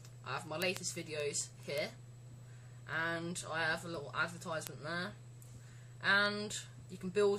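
The audio has word clock ticks from 0.19 to 7.27 s, about fifty sharp clicks every 0.15 s or so: an unlocked digital link drifting around 150 ppm.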